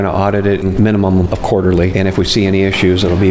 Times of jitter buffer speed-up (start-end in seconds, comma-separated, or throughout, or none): 0.73-2.53